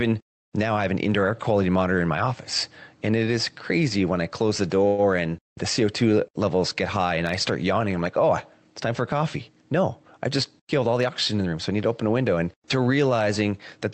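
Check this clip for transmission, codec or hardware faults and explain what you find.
Two transmission faults are audible in this speech, heard through a call codec whose high end stops near 8 kHz, which points to Opus.

Call audio freeze, 4.87 to 5.00 s: the sound stalls, most likely because delayed packets drained the jitter buffer, leaving a 109 ms fading fill before speech resumes intact.

Jitter buffer speed-up, 10.28 to 11.53 s: the receiver trimmed short pitch-period slices, about a tenth of a second in all, so speech runs at 108% without changing pitch.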